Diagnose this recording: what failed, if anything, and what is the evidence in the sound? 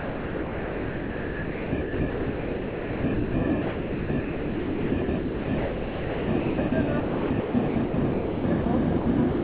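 Sound chopped by the voice detector, at the call-processing stage: from 0.00 to 3.34 s, 3.62 to 6.72 s and 7.00 to 8.66 s, about 3.0, 2.5 and 1.0 s are comfort noise. The waveform shows flat, even noise blocks between bursts, likely from sender-side voice detection gating.

Sound dropped by the voice detector, also call processing: at 8.98 to 9.06 s and 9.32 s to the end, the sound becomes smooth noise, band-limited to 4 kHz like the G.711 path.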